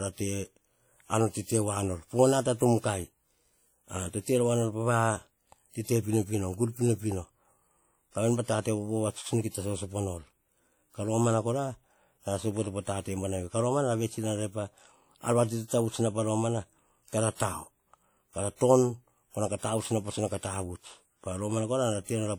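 A low-bitrate transform codec, likely WMA at a rate near 48 kbps, leaves the speech ringing and washy throughout, with hiss that swells and fades with the voice. At 17.35 to 17.40 s, just after "na pa romana kara", and again at 18.56 to 18.61 s, pre-echo occurs: coding noise spreads about 47 and 49 ms ahead of sharp attacks, so a brief hiss precedes each onset and softens it.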